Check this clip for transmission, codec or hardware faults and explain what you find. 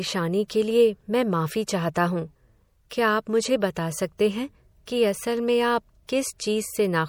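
Two kinds of fault run through this speech clip. Throughout, the sound has a plainly audible watery, swirly quality, with sibilants turning metallic and nothing above 20.7 kHz. This is likely MP3 compression at a bitrate near 64 kbps: the encoder starves weak frequency lines, which flicker on and off between frames.

Pre-echo appears at 0.48 s, 1.67 s, 2.90 s and 6.07 s. A short hiss precedes each sharp onset by 10 to 18 ms, and the attack itself sounds soft. The codec spreads quantisation noise across a whole block, so noise meant for the loud attack leaks into the quiet moment before it.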